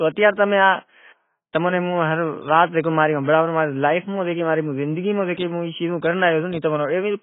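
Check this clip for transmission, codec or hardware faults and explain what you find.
One codec fault runs through the whole clip. AAC compression is the likely cause: the encoder, starved of bits at what sounds like about 16 kbps, drops everything above 3.7 kHz and coarsely quantises the rest. The speech sounds dull and muffled, with heavy smearing and a watery, warbling texture on sustained sounds and sibilants.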